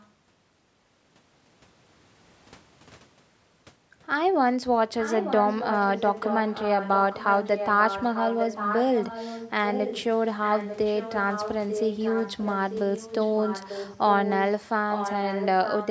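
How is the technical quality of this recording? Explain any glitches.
The main problem is an echo leak, a delayed copy of the speech trailing the original by about 0.89 s. A very faint trace appears at 0.0–0.1 s. It's then clearly audible, roughly 10 dB under the speech, at 4.99–9.52, 9.71–10.21, 10.42–14.09, 14.25–14.72, 14.91–15.47 and from 15.64 s to the end. The likely cause is a speakerphone at the far end whose echo canceller let some of its microphone pickup slip back into the call. The sound stops at 8 kHz, which fits call microphone processing.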